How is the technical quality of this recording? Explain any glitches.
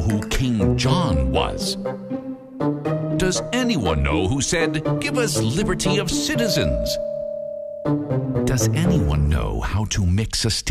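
No glitches can be heard anywhere in this recording. There is nothing in the audio that calls for a technical explanation.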